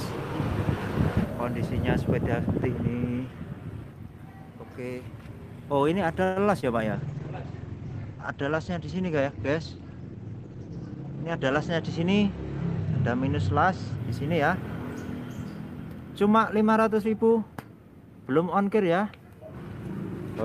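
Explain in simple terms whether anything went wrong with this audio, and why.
Packets likely got held up on the way at 6.23 s. This is a call audio freeze: the last sound stretches into a fading buzz or hiss for about 0.15 s, then carries on with nothing lost.

At 6.60 s a short concealed packet loss occurred. About 20 ms never arrived, and the receiver patched the hole with a guess, heard as a brief smear or wobble.

From 6.94 s to 14.04 s a call bitrate drop set in. The connection weakened, so the audio was coded with far fewer bits. It turns rough and muffled, losing everything above 8 kHz.

At 11.09 to 11.65 s and again at 16.84 to 17.31 s came a jitter buffer speed-up. Too much audio had piled up, so the receiver trimmed roughly 70 ms each time. Those stretches run about 11 to 12 percent faster at the same pitch.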